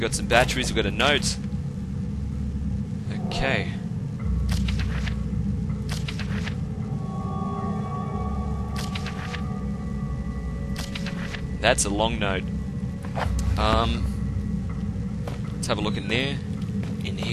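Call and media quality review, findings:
Call and media quality review findings: no faults heard in this clip.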